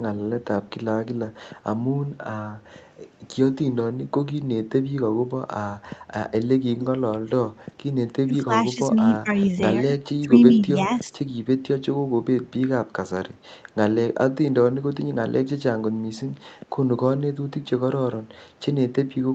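Echo leak, from 6.74 to 6.87 s: a brief, faint repeat of the talker's own sound arrives about 164 ms behind the original, roughly 15 dB quieter, audible as a short scrap trailing the speech. It is likely that the far end was playing the call through a loudspeaker, and its echo canceller let part of what its microphone picked up slip through and travel back down the line.

Speech suppressed in double talk, between 8.25 and 11.15 s: the talker's level sags in patches totalling around a second, dipping by as much as roughly 15 dB, so parts of the speech thin out or partly vanish. This fits an echo canceller meeting both sides talking at once. Unable to tell its local talker from loudspeaker echo, it turned the whole signal down, taking the wanted speech with it. Throughout, the speech is band-limited to 8 kHz, as expected from the Opus call path.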